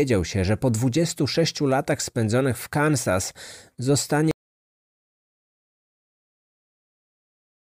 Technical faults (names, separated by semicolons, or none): audio dropout to silence